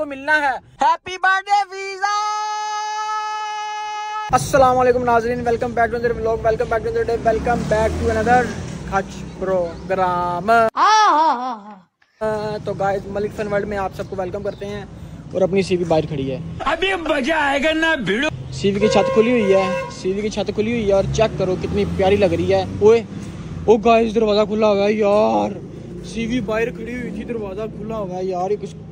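Nothing here trips the ear: the audio runs along without any dropouts, glitches or other technical hiccups to point to.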